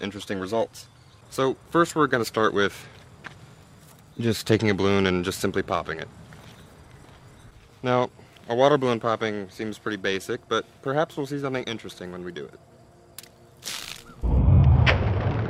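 Periodic clock jitter runs through the whole recording. Interference modulates the converter's sample clock at around 2 kHz, placing sidebands at that spacing on either side of every component, strongest on higher frequencies. The result is a rough, metallic edge that disappears during silence.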